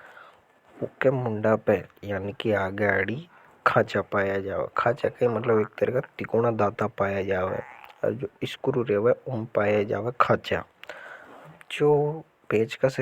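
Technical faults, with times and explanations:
No technical faults can be heard in this speech recording.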